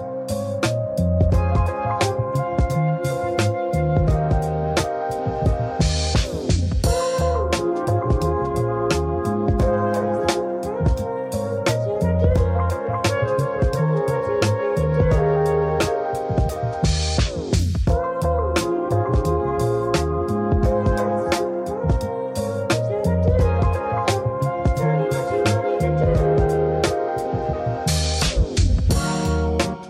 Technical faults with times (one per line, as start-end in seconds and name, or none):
none